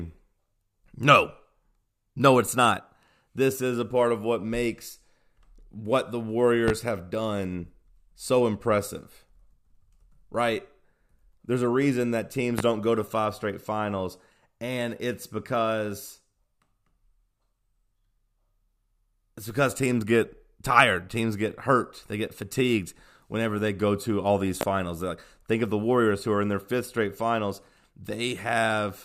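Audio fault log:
6.68 s, 12.59 s, 24.61 s: loud pop. Single sharp pops, roughly 15 dB above the speech, the last nearer 20 dB, after "what the", "a reason that teams" and "go to all these". Likely a brief voltage pulse added to the signal.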